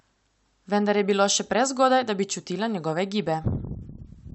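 No technical faults can be heard in this recording.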